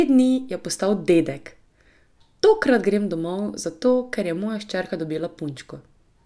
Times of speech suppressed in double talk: none

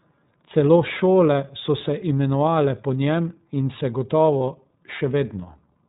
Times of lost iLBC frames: 4.38-4.41

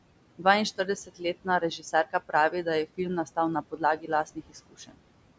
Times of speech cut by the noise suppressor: 0.78-2.34, 3.62-5.01

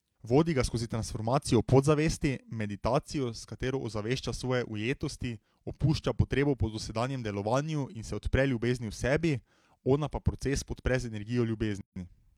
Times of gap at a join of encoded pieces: 11.81-11.96

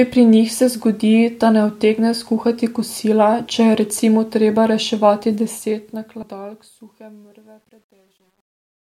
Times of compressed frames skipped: 6.22

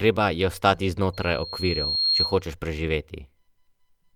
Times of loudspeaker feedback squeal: 1.13-2.41

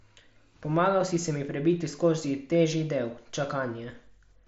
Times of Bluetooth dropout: none

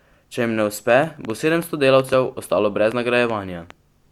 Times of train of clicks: 0.90-3.71

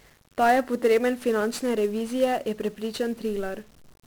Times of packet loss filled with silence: none

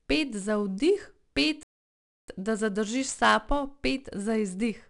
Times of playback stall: 1.63-2.28

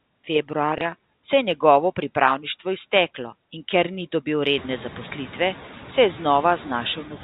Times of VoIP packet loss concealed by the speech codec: none

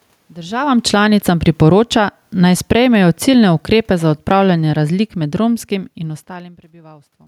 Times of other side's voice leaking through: none

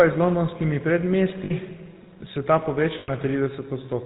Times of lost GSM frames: 1.44-1.52, 2.98-3.10

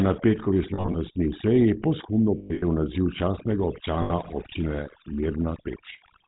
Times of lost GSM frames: 0.74-0.96, 2.38-2.65, 4.02-4.12

